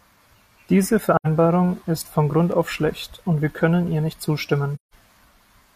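At 1.16 s the speech drops into a short soft-edged hole lasting about 85 ms, then comes back up. That's AAC frame loss with muting. The decoder had nothing for that stretch, so it zeroed the spectrum, and the overlapping windows fade the sound out and back in rather than cutting it. The length fits two lost frames.

At 2.52 s, right before "auf schlecht und wir", there's a tiny hard-edged blip. That's a repeated buffer. The next chunk of audio didn't arrive in time, so the device replayed the last one, and that 5 ms piece sounds twice in a row. The slice is so short that it comes across as a click or brief buzz rather than a stutter, which fits a 5 ms buffer.

Right after "wir können ihr nicht", from 4.75 s to 4.94 s, there's another AAC frame loss with muting, longer this time at about 170 ms. The same fade-out and fade-in leaves a soft hole, about what you'd expect from four frames going missing.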